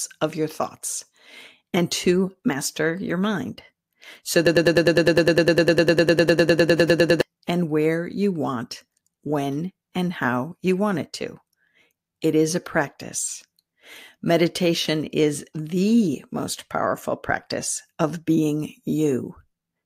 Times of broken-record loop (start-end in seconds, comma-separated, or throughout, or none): 4.47-7.21